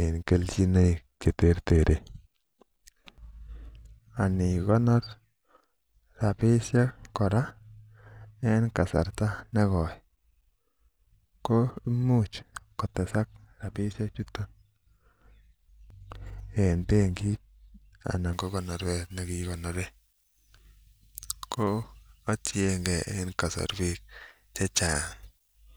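From 18.33 s to the end, there's pre-emphasis left on: the treble boost applied for transmission never got its matching de-emphasis, so 10 kHz sits about 11 dB above 1 kHz, which fits a J.17 curve. The speech turns thin, bright and hissy on sibilants.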